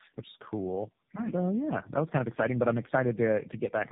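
Throughout, there's tandem speech coding: three speech codecs in a row each re-coded the previous one's damage, leaving rough, warbly speech with nothing above 3.8 kHz.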